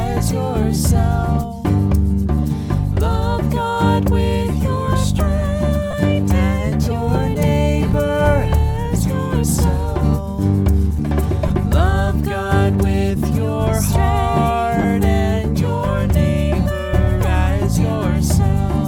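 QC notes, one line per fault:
5.91–5.93 s, 11.48 s and 14.82–14.84 s, lost LE Audio frames. The gaps last 22.5 ms, 15 ms and 22.5 ms, which fits runs of 7.5 ms frames going missing. The LC3 decoder fills each gap by repeating the last good spectrum with its signs randomised. Any steady tone in the sound becomes a brief noisy smear. Each patch is short enough that it stays a quick blur rather than fading into silence.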